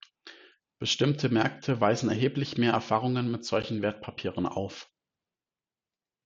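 At 3.62 s the speech drops out for an instant: a hole of roughly 11 ms of pure silence with hard edges, heard as a tiny tick or stutter rather than a fade. It is a gap between stream segments. The timestamps of two consecutive chunks do not quite meet, so the player fills the 11.2 ms space with silence. Nothing is cut from the speech itself. The timeline is simply stretched by that small amount.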